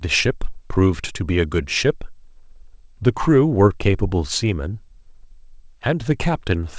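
No technical faults occur in this speech clip; the audio came through a wideband call path, which fits a G.722 codec at 64 kbps, with nothing above 8 kHz.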